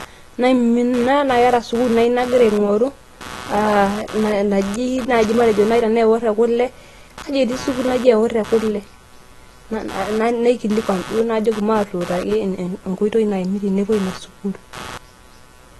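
Throughout the clip, load changes in the computer are modulating the audio circuit's shared ground. This computer activity noise comes through as a buzzing, chirping layer pulsing at roughly 150 times a second, around 20 dB below the speech, rising and falling with the machine's activity rather than with the talking.

The speech has likely passed through AAC compression at a low bitrate, plausibly near 32 kbps. Nothing is present above 12.1 kHz, so the voice sounds dull and smeared, and sibilants and held vowels carry a plainly audible warbling, fizzy texture.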